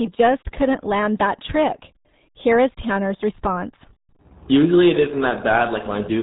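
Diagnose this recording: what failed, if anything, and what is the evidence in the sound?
The failure is at the codec stage: the speech has been squeezed through the RealAudio 14.4 codec (RealAudio 1), and the damage is heavy. Across the whole clip nothing passes above 3.8 kHz, so consonants lose their edge and the voice turns muffled, with a gargly, watery texture. That combination of hard band-limiting and coarse spectral modelling fits a bitrate around 8 kbit/s, designed to squeeze speech down a dial-up modem line.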